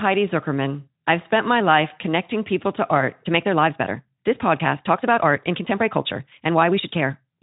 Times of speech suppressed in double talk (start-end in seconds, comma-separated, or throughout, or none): none